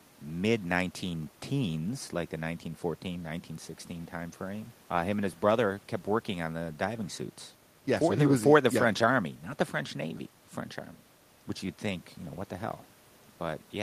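Nothing in this speech recording points to a technical fault, and the only thing underneath is a bit of room noise sitting about 32 dB below the speech, which belongs to the space the microphone was in.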